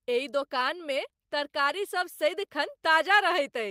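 No technical faults are audible anywhere in this recording.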